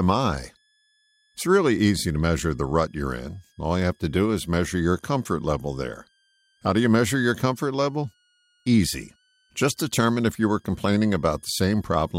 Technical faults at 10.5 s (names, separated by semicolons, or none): switching supply whistle